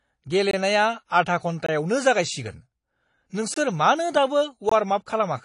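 Throughout the speech, the top end stops dead at 10.5 kHz, and what remains sounds dull and smeared, with a fizzy, warbling edge on sibilants and sustained vowels. The codec damage is plainly audible and is likely from AAC compression at a low bitrate, around 32 kbps. At that rate, AAC-LC pulls its cut-off down and spends its few bits where the hearing model says they matter most. Some bands are left thinly coded or patched with noise, which produces the swirling texture.

At 0.51, 1.66, 3.54 and 4.69 s, the audio drops into a block of digital silence about 21 ms long each time, for example 0.51 to 0.53 s. The signal jumps straight to zero and back with no fade, so each gap is heard as a short hole. The identical length of every dropout fits a 1,024-sample output buffer that was not filled in time.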